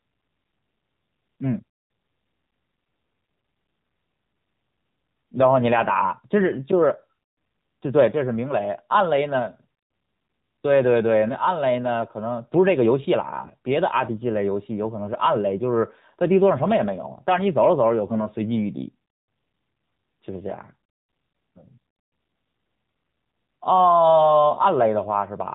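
Throughout, the speech passes through the AMR narrowband mobile codec at 7.4 kbps. Nothing above 4 kHz survives. The voice sounds plainly buzzy and synthetic.

From 18.10 to 18.21 s, AMR bit errors strike, around 4 percent of bits, fitting two damaged 20 ms frames. Misplaced pulses make the voice briefly hoarse and gargly.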